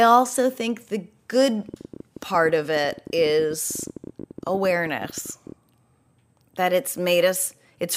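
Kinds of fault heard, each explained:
Train of clicks: a burst of near-identical pulses laid over the speech from 1.69 s to 5.53 s, starting just after "also think the good". They arrive at about 14.9 per second on an uneven, irregular spacing, around fifty in all, and peak roughly as loud as the speech itself, so the ticking stays audible through pauses too. The likely cause is interference from nearby equipment or a faulty connection or power supply.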